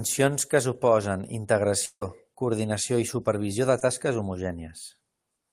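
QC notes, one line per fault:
1.85–2.03 s, long network dropout: after "que suposen", the sound continues as a fading buzz then about 60 ms of silence, likely from lost packets; the waveform flattens and the spectrogram shows a blank gap before "coordinació i supervisió de".
3.79–3.83 s, short concealed packet loss: just after "coordinació i supervisió de", a 20 ms hole is filled by extending the prior sound, heard as a brief smear; the spectrogram shows a short blurred, repeated patch.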